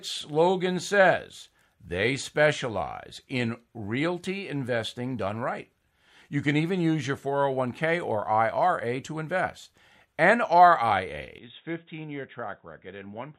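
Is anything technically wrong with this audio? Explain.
Yes, there is one fault in this speech. An input switched to a poorer device at 11.38 s and stays that way until the clip ends at 13.39 s. The recording most likely jumped to another microphone or a headset's call profile mid-take. From that instant nothing above 3.8 kHz survives, so the speech turns abruptly dull and boxy. It also drops about 10 dB in level, and a faint new background noise sits well below it. There is no silence at the changeover.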